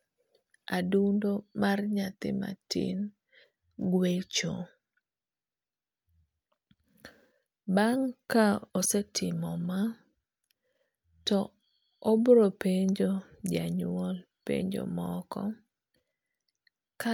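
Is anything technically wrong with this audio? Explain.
No, the recording holds steady throughout with nothing in the signal chain breaking up, dropping out or shifting in a way a listener would flag as a technical problem.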